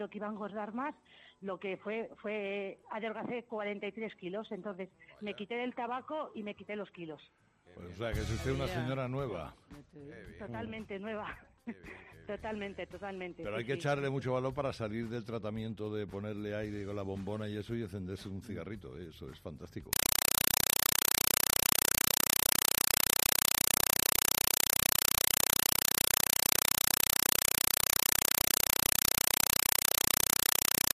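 From 19.93 s to the end, the sound is replaced by very loud, harsh static that chatters about 31 times a second, each 4 ms burst of noise followed by silence. This is a compressed stream played as audio: an AC-3 (Dolby Digital) bitstream, consistent with a 192 kbps encode, was passed as if it were ordinary samples and never decoded, so each data frame plays as noise padded out with zeros.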